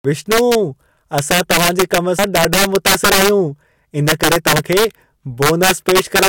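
From the very start and all the way through, the loudest peaks of the speech break into harsh, violent cracks. That's integer overflow. The level is pushed about 8 dB past what the integer format can hold, and instead of being limited, each sample that goes over wraps around to the opposite extreme of the range. Only a few percent of samples cross that line, but each one slams from full positive to full negative, so it sounds far sharper and nastier than ordinary clipping.

Then at 2.19 s, right after "असां तव्हां जे कम", there's a sudden skip where around a tenth of a second of audio just vanishes. The two sides are butted together with no gap, so it jumps forward abruptly. This is likely audio missing between chunks. The processor seems to work in 2.5-second blocks and dropped a short piece while closing one block and opening the next.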